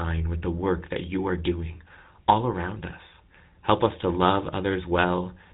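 From start to finish, the speech carries GSM full-rate codec damage, plainly audible: a buzzy, gravelly roughness. Its regular-pulse excitation rebuilds the voice coarsely, consistent with about 13 kbps. A spectrogram shows nothing above 4 kHz and smeared, grainy harmonics.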